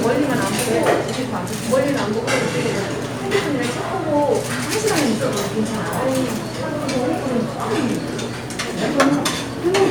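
Nothing goes wrong anywhere in this one; the sounds just carry on as they should, with no technical faults to point to.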